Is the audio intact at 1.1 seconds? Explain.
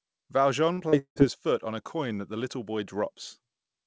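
No. From 0.98 to 1.19 s a long network dropout likely stopped packets from arriving. The receiver stretched the last sound into a fading buzz for about 0.17 s, then dropped to near silence before the audio resumes at "his foot on a", with about 0.18 s lost.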